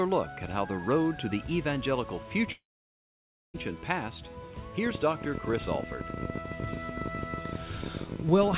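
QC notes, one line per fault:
2.52–3.56 s, long network dropout: a short fading fill, then about 0.93 s of silence; 1.02 s of audio is lost, likely through packet loss.
4.86–8.58 s, train of clicks: irregular ticks at about 18.8 per second, peaking around 10 dB above the sound, likely from interference or a faulty connection or power supply.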